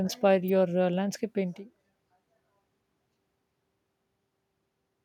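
A speech clip with an electrical switching spike at 0.48 s, a sharp snap just before "uh landscape painting", likely from a nearby switch or motor arcing into the audio line; the room noise and a level change around 1.5 s as the talker moves are part of the recording.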